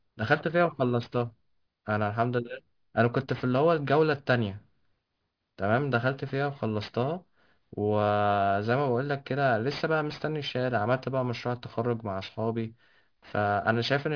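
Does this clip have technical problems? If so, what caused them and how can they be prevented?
Yes. Aliasing runs through the whole clip: the speech was resampled downward without an anti-aliasing filter, which fits a drop from 44.1 kHz to 11 kHz. Everything above 5.5 kHz folds back as false tones roughly 25 dB below the speech, making sibilants gritty and metallic. To prevent it, low-pass filter below half the new sample rate before downsampling.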